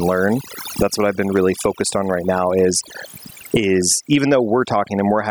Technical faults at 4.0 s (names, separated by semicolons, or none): overdone noise removal; gain pumping